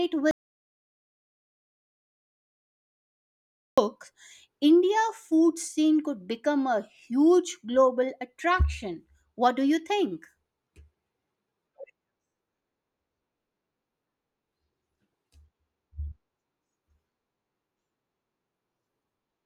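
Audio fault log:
0.31 to 3.78 s, audio dropout to silence: the speech cuts off abruptly a fraction of a second in and does not return for almost 3.5 seconds. The gap is dead silence with no room tone or background hiss, and then the speech resumes mid-flow. Whatever was said in that span is lost. The total absence of any noise floor points to the input signal being likely lost, through a disconnected device, a dropped link or a mute, while recording continued writing silence.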